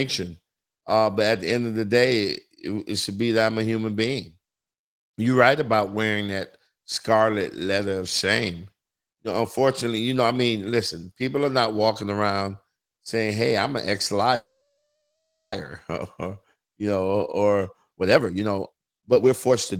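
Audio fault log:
14.35–15.55 s, call audio freeze: Incoming packets were likely held up in transit, so the jitter buffer ran dry just after "I'm an ex". The receiver stretched the last sound into a fading buzz or hiss for a moment, then about 0.77 s of silence, filling 1.17 s in total. When the packets arrived the speech resumed where it had stopped, so nothing is lost, but a 1.17 s gap now sits in the sentence and everything after it is 1.17 s later.
17.71–19.79 s, jitter buffer speed-up: The jitter buffer held more audio than its target. To shed the excess delay, the receiver cut many short, pitch-period-sized slices in quick succession, starting just after "you know or" and running to the end. The speech plays at about 147% speed with its pitch unchanged, so it sounds rushed. About a second of audio is removed over this stretch.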